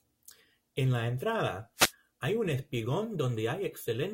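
At 1.76 s, after "la entrada", a wireless microphone noise hit: the FM radio link fades and receiver noise bursts as static for 0.16 s, ending before "hay un".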